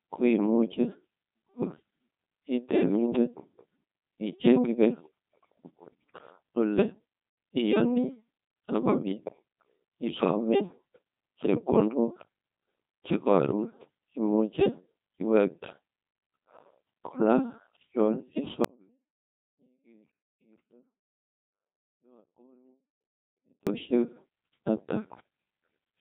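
Speech runs through the whole clip as the buzzy, robotic sound of the Codec 2 vocoder. The decoder rebuilds the voice from sine waves driven by pitch, voicing and a spectral envelope, so the original waveform is gone, and nothing sounds above 3.8 kHz. The heavy synthetic damage fits a 2.4 kbit/s mode. A merely band-limited or lossy transform codec would keep the natural texture of the voice. Here the voice itself is resynthesised, which is why it sounds mechanical rather than muffled. From 18.65 s to 23.67 s there is an audio dropout to a faint residue. For about 5 s the voice falls abruptly to a faint leak roughly 35 dB below its normal level, then returns just as suddenly. The likely cause is the wanted signal being lost while the path after the break stayed live. A pause would leave true silence or room tone, and a fade would slope gradually. This change is instantaneous at both edges, and faint sound remains in the gap.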